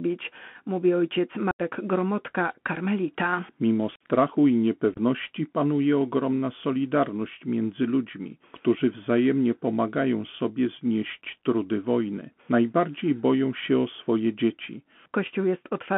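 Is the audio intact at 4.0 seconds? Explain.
No. Unconcealed Bluetooth headset packet loss strikes from 3.96 to 4.02 s. About 49 ms of voice packets went missing and were replaced with silence or an idle pattern. This leaves abrupt holes and a briefly quieter return. The Bluetooth CVSD headset codec also narrows the band to 150 Hz–3.4 kHz, which fits a 64 kbps link. Its one-bit step coding adds scratchy sibilants and granular hiss.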